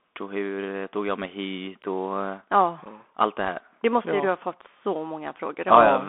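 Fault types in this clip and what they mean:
Bluetooth CVSD headset codec: narrowband one-bit delta modulation, here limited to roughly 200 Hz to 3.5 kHz, with plainly audible granular hiss and scratchy, distorted sibilants.
Unconcealed Bluetooth headset packet loss: a single lost voice packet near 2.85 s leaves an abrupt hole of about 7.5 ms, heard as a brief click or dropout.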